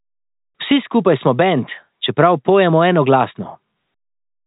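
Speech carried over G.711 telephone coding, with the content confined below 4 kHz and only a faint quantisation hiss riding along with the signal level, shows no technical faults.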